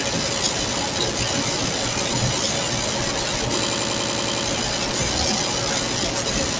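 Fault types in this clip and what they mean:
System hang loop, 3.62 to 4.46 s: the machine or its audio driver stalled while the sound hardware kept replaying the same stretch of its ring buffer, so one 92.88 ms slice of audio repeats exactly nine times at about 10.8 Hz, a machine-gun stutter rather than a buzz. That slice length fits a 4096-sample buffer, and essentially nothing is lost once playback resumes. The band-limited call sound, with nothing above 8 kHz, carries straight through the loop.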